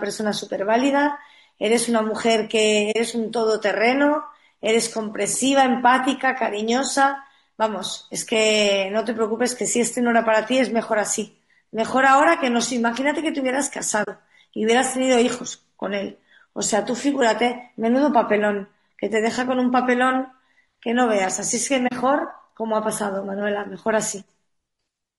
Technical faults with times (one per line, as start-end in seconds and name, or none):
0.00-25.18 low-delay AAC compression
2.91-2.96 AAC frame loss with muting
14.03-14.08 AAC frame loss with muting
21.87-21.92 AAC frame loss with muting